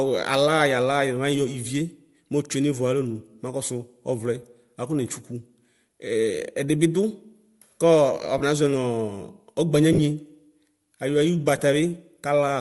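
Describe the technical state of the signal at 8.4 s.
At 8.4 s, lost LE Audio frames leave a gap of about 22.5 ms, from 8.38 to 8.41 s. That length fits three 7.5 ms frames. To cover the gap, the decoder repeats the last good spectrum with randomised phase signs, which turns the speech into a brief noisy smear. The gap is too short for the fade-out to go far, so the sound shows a short grainy blur instead of silence before normal decoding resumes.

Underneath, the whole passage carries plainly audible transform-codec damage, most likely Bluetooth LC3 compression. The speech has a breathy, granular upper edge, where high-frequency detail has been replaced by noise fill instead of the original content. The character points to LC3 at around 48 kbps with short 7.5 ms frames. This is the same codec whose frame structure sets the length of the dropout at 8.4 s.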